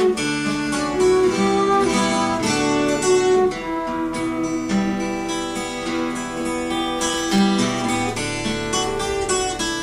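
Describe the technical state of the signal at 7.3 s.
At 7.3 s the signal is inside a burst of loose connector crackle running from about 6.99 to 7.38 s, roughly 0.39 s long. A worn or dirty contact is rapidly making and breaking, chopping the audio and adding pops from any DC on the line, so it sounds like irregular scratching. On a waveform this shows as ragged dropouts and sharp spikes. A spectrogram shows scattered vertical broadband streaks across that span.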